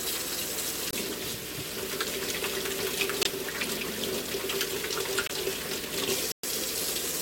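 Corrupt frame muted at 0.89, 3.23, 5.27 and 6.32 s in this recording of everyday sounds: damaged compressed frames were rejected by the decoder and replaced with silence, leaving abrupt gaps of 0.06, 0.04, 0.08 and 0.13 s, sized like one to five frames, with timing intact.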